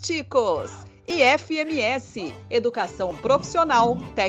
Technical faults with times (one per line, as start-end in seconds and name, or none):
1.10-1.12 overlap between stream segments
3.11 overlap between stream segments